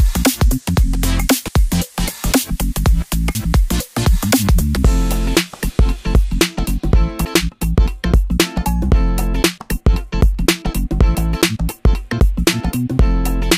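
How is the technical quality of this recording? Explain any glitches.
The recording has two glitches. Audio missing between chunks at 3.35 s and 7.25 s: about a tenth of a second drops out and the sound jumps ahead, likely lost while the recorder switched between 4-second chunks.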